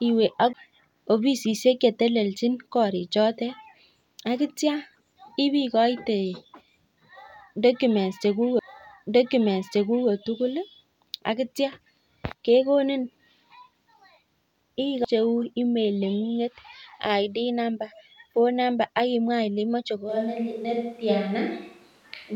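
Speech, with three CD skips and a late microphone change. At 0.53 s, 8.59 s and 15.04 s there is a tick and a very brief mute, around 10 ms or less, after which the audio carries on from a different point rather than where it stopped. The laser has jumped to another turn of the disc's spiral. The displacement in the material is what separates a skip from a simple dropout, where the sound would resume in place after the gap. From 20.11 s to the end the sound turns roomy and hollow, with thinner bass and background noise sitting about 35 dB below the speech, while the overall level stays roughly the same. This is a switch to a distant microphone, likely because the close microphone's feed failed and a farther one took over. The abrupt onset, with room tone and bass loss arriving together, distinguishes it from reverb or EQ applied gradually.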